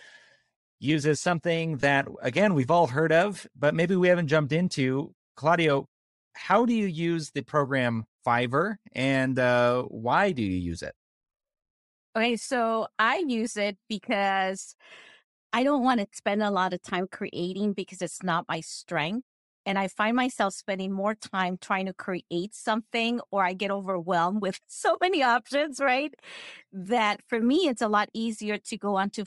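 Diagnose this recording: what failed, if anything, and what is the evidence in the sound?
Throughout the speech there is a breathy, grainy edge, with the upper spectrum sounding hollowed out and replaced by a noisy hiss. The codec stage is likely at fault: Bluetooth LC3 compression, the LE Audio transform codec. Its short frames, which fit 7.5 ms, and a fairly lean bitrate, which fits around 48 kbps, force it to zero many high-frequency coefficients and substitute noise fill. That substitution produces the grainy texture over the speech.

Two brief noisy smears interrupt the speech, from 1.80 to 1.83 s and from 28.68 to 28.70 s. In each, the sound briefly loses its detail and turns into a rough wash. These are lost LE Audio frames at the network or radio link. The first gap fits three lost frames (22.5 ms) and the second fits two (15 ms). During each gap the LC3 decoder repeated the last good spectrum with randomised signs, which smears the sound into noise.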